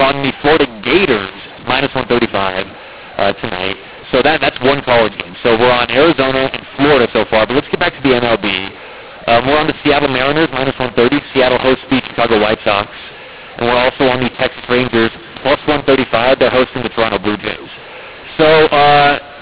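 From start to finish, the speech suffers a mu-law and A-law mix-up: samples written with the mu-law companding curve are decoded on the A-law curve, so every level maps to the wrong amplitude. Some peaks swell and others shrink, and near-silent samples jump well above zero, making the voice harsh and gritty while pauses fill with hiss. On a waveform, the gaps show a thick noise floor instead of a flat line, and the spectrogram shows broadband smearing up to the 4 kHz ceiling of the 8 kHz telephone coding.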